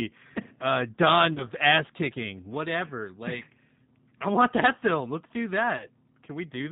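G.729 codec, throughout the clip: the speech passes through the G.729A codec at 8 kbit/s. Each 10 ms frame is rebuilt from a vocal tract filter, a pitch predictor and a handful of pulses, so nothing above 4 kHz survives. The damage is plainly audible, with a narrow, muffled band and a rough, slightly synthetic edge on the voice.

VoIP packet loss concealed by the speech codec, at 1.33 to 1.48 s, 3.84 to 3.88 s and 5.77 to 5.87 s: each time about 30 ms of audio goes missing, which fits a single lost packet. The decoder fills the hole by stretching its last pitch and filter state at falling gain, giving a brief buzzy or tonal smear. Because each frame depends on the one before, the voice stays weak or distorted slightly past the gap.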